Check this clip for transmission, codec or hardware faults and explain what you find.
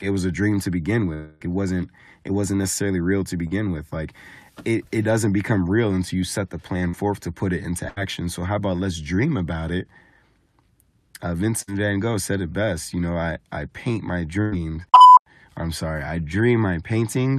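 Yes, there are transmission faults in this speech clip: one long dropout, two short concealed losses, and three bursts of packet loss.

Long network dropout, 1.13 to 1.47 s, between "a dream to begin" and "wasn't it wasn't necessarily". The cause is likely a stall in the network stream. About 260 ms of audio never arrived. The receiver extended the last sound for roughly 270 ms as a decaying buzz or hiss rather than falling silent. When speech resumes, the missing stretch is simply gone.

Short concealed packet loss at 3.47 to 3.53 s and 6.89 to 6.95 s, the second falling between "you set the plan" and "to put it into". Each time about 40 ms failed to reach the decoder in time. The receiver continued the preceding sound from its pitch or as shaped noise, then blended back into the real signal. The result is a brief smear or wobble rather than a clean gap.

Burst of packet loss at 7.89 to 7.98 s, between "to put it into" and "so how about let's", then at 11.62 to 11.69 s and 14.41 to 14.54 s. 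Consecutive packets totalling about 80, 60 and 100 ms were lost. In each case the receiver stretched the last sound into a held buzz or fading hiss, turning it down across the gap. The speech then picks up further along, with that span of audio missing.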